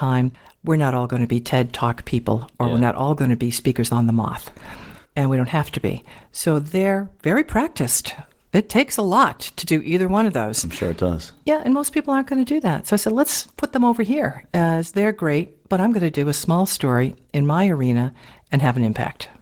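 Throughout the speech, Opus voice compression at a low bitrate, which points to around 16 kbps, codes the excitation coarsely, with a CELT layer above a SILK core. The result is plainly audible: the voice sounds hoarse, slightly muffled and faintly robotic.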